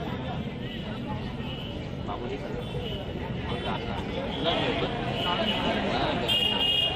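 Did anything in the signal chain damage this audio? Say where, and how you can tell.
Yes. A metallic buzz runs throughout, the level pulsing by about 6 dB near 300 Hz. This is overlap-add ripple: a frame-based processing stage rejoined windows whose overlap doesn't sum flat.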